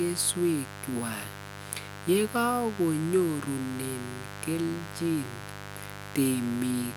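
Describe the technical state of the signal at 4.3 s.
Mains buzz is present at 4.3 s, as it is throughout the clip. Sharp switching spikes from the 50 Hz supply, from something like a dimmer, a rectifier or an unshielded cable, leak into the signal twice per cycle, so the interference carries a dense stack of harmonics reaching well into the kilohertz range. It sits roughly 15 dB below the speech, heard as a steady, raspy buzz under it.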